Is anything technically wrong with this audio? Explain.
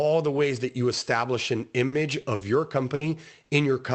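Yes. From 1.87 s to 3.52 s, just after "that you establish an", the speech turns choppy and robotic, with short pieces missing. This is repeated packet loss: audio kept arriving late or not at all, and each hole was patched by stretching the last sound forward, with the next hole following soon after. The longest single dropout is about 60 ms, and roughly a third of a second of sound is rebuilt this way across the stretch. The top end stops near 8 kHz, which fits an Opus call codec at a modest bitrate.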